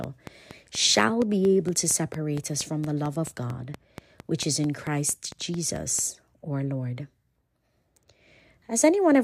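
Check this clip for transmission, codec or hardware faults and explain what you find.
One hardware-type fault is present in the speech. A train of clicks runs from 0.04 to 6.00 s: about thirty evenly spaced pulses at 4.37 per second, likely interference from nearby equipment or a struggling interface. They tick through the speech and its pauses, peaking roughly 10 dB above it.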